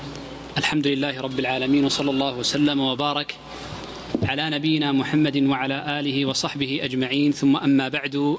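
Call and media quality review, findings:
Gain pumping, whole clip. Loud and soft parts pulled closer in level; level swing around 20 dB, dynamics squashed. Likely cause: input gain far too high, fast limiter/compressor clamping. Distinct from a noise gate: noise rises between sounds instead of cutting out. Call-side microphone processing present, nothing above 8 kHz, low bass trimmed.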